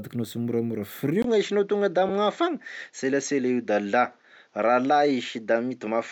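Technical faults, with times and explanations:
1.22 to 6.11 s, input switched to a poorer device: after a 20 ms gap the sound goes duller and a bit boxy, with nothing above 7.6 kHz and a new noise floor roughly 45 dB down, level unchanged. Likely the system swapped to a narrower-band mic or headset profile.
2.09 s, lost LE Audio frames: one 7.5 ms dropout where the LC3 decoder filled in by reusing the previous spectrum with scrambled signs, so the sound briefly smears into noise instead of going silent.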